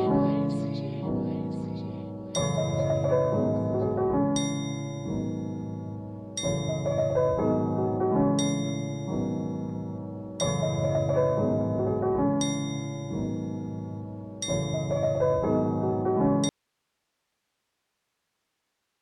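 An audio dropout to a faint residue begins at 16.49 s and runs to the end of the clip. The sound cuts off abruptly, leaving only hiss about 50 dB below the earlier level, likely because the signal was lost while the path after the break stayed live.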